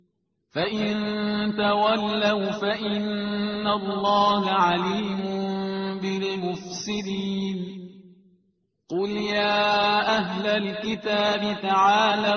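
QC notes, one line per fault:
Nothing to flag here; I listened all the way along and didn't catch anything worth noting.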